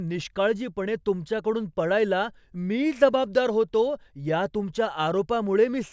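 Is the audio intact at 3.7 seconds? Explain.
No. From 1.75 to 4.5 s a resampler restarted on every block converts 24 to 16 kHz in 250 ms pieces, so each edge ticks at 4 Hz, seen as thin vertical spectrogram lines during speech.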